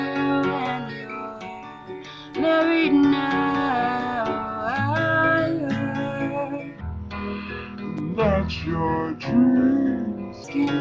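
From 6.81 s to 10.44 s the audio suffers a wrong sample rate fault. Samples captured at 22 kHz are played back at 16 kHz with no conversion. Everything runs at 0.726 times normal speed. Pitch drops by about 5.6 semitones, and the two shifts are locked together. The sound turns low, heavy and dragged out. It stretches across those seconds, then returns to its proper rate just before the clip ends.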